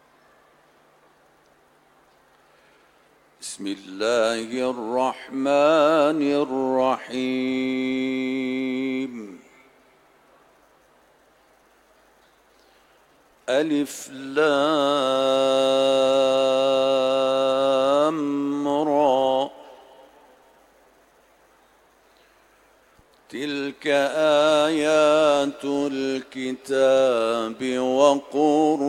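Sample clock jitter runs through the whole clip. The converter's clock wanders by about 0.7 microseconds, so each sample lands slightly off time. The error, about 45 dB below the signal, adds a faint hiss that thickens on loud, bright passages and disappears in silence.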